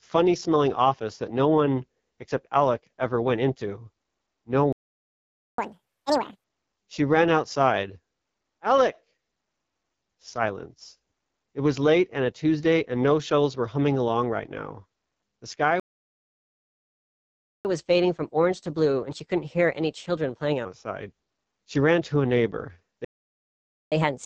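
Right through, the speech carries the AMR wideband (HD Voice) codec at 8.85 kbit/s, one of its lowest rates, so voices sound rough and raspy, with nothing above about 7 kHz.

At 4.73 s a playback stall cuts the sound dead for 0.86 s, likely because the player ran dry of data. From 5.58 to 6.44 s it does catch-up at higher speed, racing through the backlog at 2x with pitch jumping nearly an octave before settling.

Another stall hits at 15.80 s and lasts 1.85 s. The catch-up from 17.65 to 20.65 s is gentler, at 1.15x and roughly two semitones sharp.

The last stall comes right after "ran to a neighbor", at 23.05 s, for 0.87 s. From 23.92 s to the end the sound runs 1.25x fast, about four semitones high.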